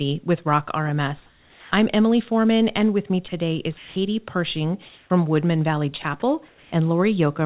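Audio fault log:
1.26–1.72 s, 4.86–5.10 s and 6.48–6.72 s, comfort noise in place of the background: in each pause the real room tone gives way to a flat, detail-free hiss, which likely means the sender stopped transmitting on silence and the receiver synthesised noise roughly matched to the background. The level shifts give it away: about 4 dB quieter in the first gap, about 2 dB louder in the second, about 6 dB quieter in the third, against a background sitting roughly 32 to 39 dB under the loudest parts.
3.28–3.32 s, 3.78–3.96 s and 6.02–6.04 s, sound dropped by the voice detector: right after "and with me" a 40 ms slice of the sound vanishes into steady noise. At 3.78 s there's a 180 ms stretch of noise that swallows about 100 ms of real sound, and at 6.02 s a brief 20 ms blink does the same. The likely cause is the sender's voice detector mistaking quiet sound for background and cutting transmission until it retriggered, with comfort noise filling each hole. 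All of this sits on a narrowband call path with nothing above 4 kHz.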